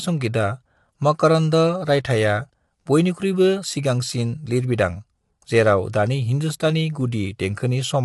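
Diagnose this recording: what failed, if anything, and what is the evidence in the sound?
The damage sits at the codec stage and runs through the whole speech clip. The voice is plainly rough and grainy, with a hiss-like fill between the pitch harmonics, and nothing above about 11.6 kHz. That pattern points most likely to low-delay AAC compression (AAC-ELD), at a rate around 32 kbps. Its short frames blur the harmonic structure, which separates it from simple band-limiting or an analogue fault, where the harmonics would stay clean below the cutoff.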